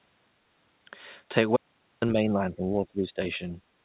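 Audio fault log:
1.57–2.02 s, audio dropout to silence: the sound stops dead mid-flow for about 0.45 s and returns abruptly. The gap is silent with no room tone, so the input was likely lost while silence kept being written, and what happened then is gone.
2.14–3.2 s and 3.38–3.57 s, speech suppressed in double talk: the speech dips and thins in broken patches. The first stretch is hit hardest, falling by roughly 15 dB over most of a second, and the second stretch dips only about 5 dB. The likely cause is an echo canceller that could not separate the near-end talker from the overlapping far-end loudspeaker echo and attenuated the near-end talker along with it.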